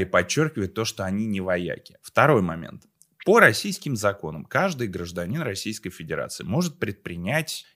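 No dropouts, clicks, distortion, level jumps or timing errors turn up anywhere across the speech; nothing to report.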